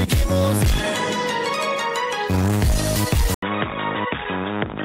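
At 3.34 s the sound drops out for about 80 ms. It returns dull and boxy, with nothing above 3.8 kHz, slightly quieter, over a faint new noise floor. It stays so to the end. The input was likely switched to a poorer device.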